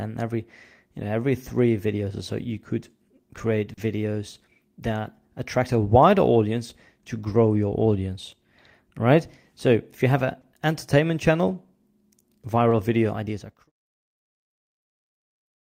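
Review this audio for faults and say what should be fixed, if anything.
Short concealed packet loss occurs three times in this speech. Packets arrived too late for the decoder, which extended the preceding sound and then crossfaded back, leaving brief smears: about 40 ms at 3.73 to 3.79 s after "so you could create", 20 ms at 10.41 to 10.45 s between "if you have an" and "entertainment channel", and 20 ms at 12.69 to 12.73 s before "video ideas are crucial". A larger jitter buffer or a steadier network path would prevent these gaps. The smooth fade-out ending at 13.71 s is intentional and needs no fix.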